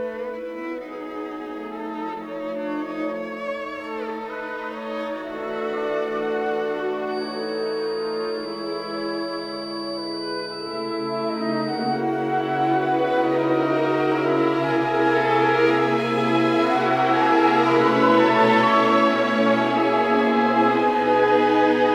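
From 7.05 to 12.06 s, a loudspeaker-to-microphone loop has likely settled right at the edge of feedback, ringing at one frequency without running away. The result is a feedback whistle: a thin, steady tone near 4.6 kHz, about 20 dB below the sound, wavering in level.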